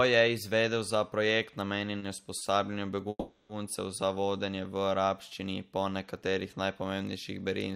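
In this speech recording, two packets arrived late, so the jitter buffer briefly ran dry, causing two short stalls from a late packet. Right after "je izvedel za projekt", at 1.99 to 2.05 s, and again at 2.38 to 2.44 s, the receiver stretched the last sound by about 30 ms each time until the packet came in, then carried on from the same point. Nothing is lost. Each stall holds a syllable slightly too long with a faint buzzy dip, and pushes the rest of the audio 30 ms later. A longer call audio freeze follows, likely caused by packets held up in transit until the buffer emptied. From 3.09 to 3.52 s the last sound is drawn out as a fading buzz for about 400 ms, ending in roughly 30 ms of silence, before the audio resumes with "za vodenje v arabščini". Nothing is missing, but the freeze inserts a 400 ms pause and delays everything after it by that amount.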